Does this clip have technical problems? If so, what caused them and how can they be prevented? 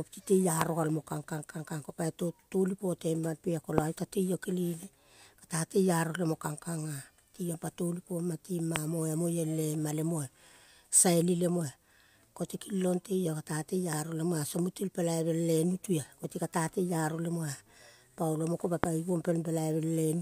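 Yes, there are four loud pops in this speech clip, at 0.61 to 0.64 s, 3.78 to 3.80 s, 8.76 to 8.78 s and 18.84 to 18.86 s. Each is a single sharp hit, about 20 to 25 dB above the speech, which carries on underneath. The likely cause is a brief voltage spike, from a plug, switch, static discharge or driver glitch, getting into the signal chain. To prevent this, keep connections secure, avoid switching gear mid-take, and ground against static.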